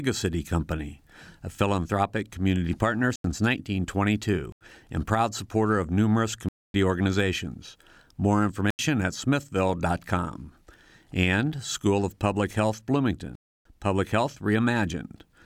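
Speech with five blocks of digital silence, hard cuts to silence: 3.16–3.24, 4.52–4.61, 6.49–6.74, 8.70–8.79 and 13.35–13.65 s. The 85 ms gaps fit an unfilled 4096-sample buffer; the longer 256 and 300 ms holes suggest several buffers missed.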